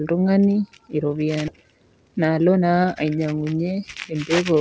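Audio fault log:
1.48–1.50 s, skip ahead: The sound jumps forward with no gap and nothing filled in. About 400 ms of audio is gone. The two sides are joined almost directly. A backlog of waiting audio was dropped to cut the delay.
1.57–2.63 s, jitter buffer speed-up: The speech runs at about 113 percent speed with its pitch unchanged, so it sounds hurried. The buffer held too much audio. Short pitch-period pieces were cut out again and again, removing roughly 150 ms in all.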